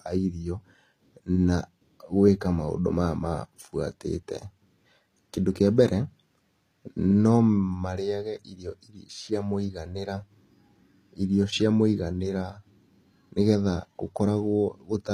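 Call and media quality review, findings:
Speech throughout: gritty, lispy s sounds, metallic treble, nothing above 14.9 kHz. Likely HE-AAC compression rebuilding treble by band replication. Damage fits a low bitrate, near 24 kbps.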